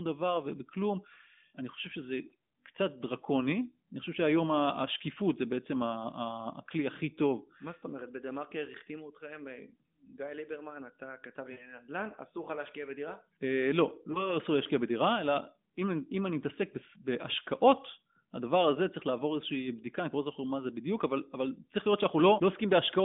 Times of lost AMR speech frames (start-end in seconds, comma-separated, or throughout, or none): 11.52-11.70, 14.12-14.36